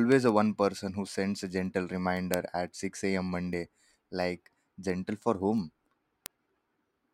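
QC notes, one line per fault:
0.12–7.11 s, word clock ticks: around forty sharp ticks about every 0.15 s, as an unlocked receiver clock roughly 150 ppm off drops or repeats a sample.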